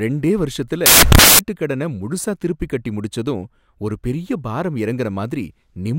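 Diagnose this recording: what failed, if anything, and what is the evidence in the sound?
Samples built from the wrong bytes, 0.86 to 1.39 s, after "ரெண்டே வருஷத்துல" and before "முழுசா திருப்பி கட்டி முடிச்சதும்": a sample-format conversion fault. Bytes were misassembled, so the fast-changing low bits became the dominant part of each value, producing loud, harsh broadband noise across that stretch of speech.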